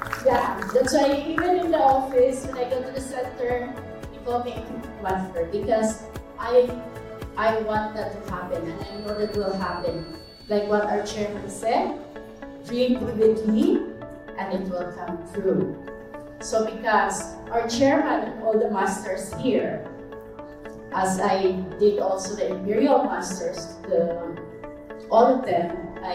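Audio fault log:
8.71–10.86 s, feedback whistle: a thin, steady tone at 4.5 kHz sits around 25 dB below the main sound, swelling and fading slowly in level. This is likely a loudspeaker-to-microphone loop held just at the edge of feedback, sustaining one frequency without building further.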